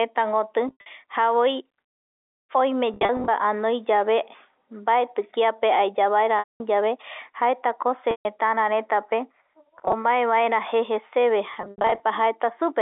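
Packet loss with pitch repetition interrupts the speech at 0.68, 2.94, 6.39, 8.11, 9.77 and 11.54 s, dropping 90 to 240 ms of audio each time. The gaps are patched by looping the last pitch period, so short ones sound like a brief, buzzy held tone and longer ones fade into silence. A spectrogram shows frozen, evenly spaced harmonic bands, and the waveform shows identical repeating cycles that fade downward.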